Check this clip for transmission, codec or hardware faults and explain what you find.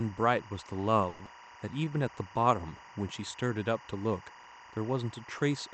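Three faults are present in this speech clip, which travelled over an Opus call path limited to 8 kHz.

Timecode bleed runs throughout: a chirping warble alternating near 1 and 2 kHz, about 20 dB below the speech, paced at 23.976 frames per second. Its regular rhythm separates it from random interference.

From 1.09 to 1.28 s the last sound stretches into a fading buzz for about 170 ms, then about 60 ms is skipped. This is likely a long network dropout rather than a brief packet loss.

From 1.71 to 1.91 s a jitter buffer slow-down repeats pitch periods, adding 45 ms. Speech plays at 82% speed without any pitch drop, unlike a clock slip.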